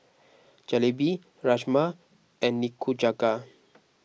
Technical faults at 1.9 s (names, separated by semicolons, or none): none